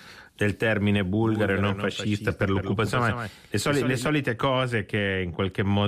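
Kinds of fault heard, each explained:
Doubled audio track: from just after "del termine", about 1.22 s, to 4.08 s, a second full-band copy of the speech trails roughly 150 ms behind at around 10 dB lower, dry and abruptly switched, likely from a second capture path mixed in alongside the original.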